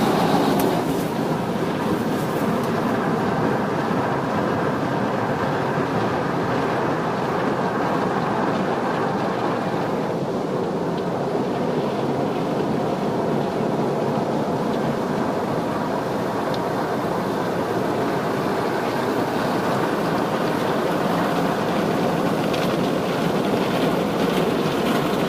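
Nothing in this recording of sounds stands out as a technical fault, so there's nothing here to track down.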